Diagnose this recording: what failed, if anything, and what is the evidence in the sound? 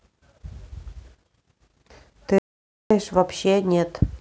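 The speech suddenly drops to silence from 2.38 s to 2.91 s, about 0.52 s, with no room tone, then resumes mid-flow. This is an audio dropout to silence, likely a lost input link or device while the recorder kept writing zeros.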